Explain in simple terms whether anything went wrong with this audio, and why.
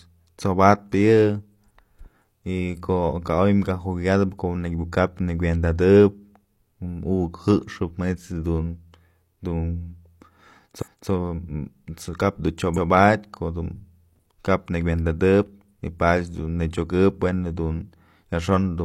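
The speech stutters twice from repeated frames: at 10.78 to 11.07 s about 0.28 s replays once, and after "kap dun" at 12.73 to 12.87 s about 0.14 s replays. Unlike a dropout, nothing goes missing. The same sound plays again, so the clip gets longer.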